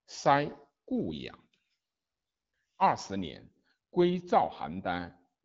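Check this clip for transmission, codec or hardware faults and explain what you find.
Nothing stood out on listening to this speech clip.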